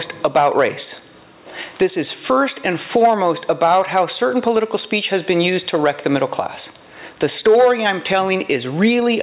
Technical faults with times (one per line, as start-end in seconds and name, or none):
0.00-9.22 gain pumping